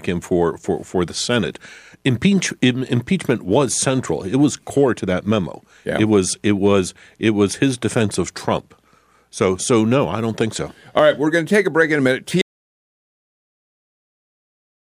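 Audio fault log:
12.42–14.90 s, audio dropout to silence: right after "break in a minute" the speech cuts off abruptly and silence runs to the end, likely from a lost input while recording continued. Unlike a fade or noise gate, there is no decay and no room tone.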